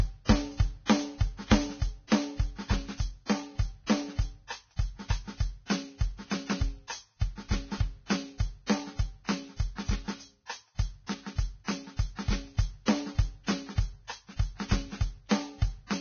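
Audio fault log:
Throughout, Vorbis compression, likely: the music is hissy and grainy with smeared attacks and nothing above about 6.5 kHz, which fits heavy coding at around 18 kbps.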